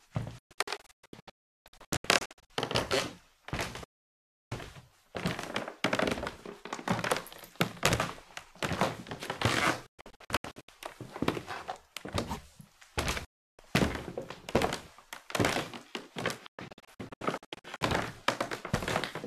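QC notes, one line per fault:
0.38–2.50 s, 3.84–4.52 s, 9.86–10.69 s, 13.25–13.59 s, 16.46–17.82 s: digital broadcast dropout. Sound snaps to silence within 3 ms and resumes mid-stream. The first, third and fifth are scattered holes (longest 360 ms). The receiver muted on lost or corrupt frames, discarding that audio.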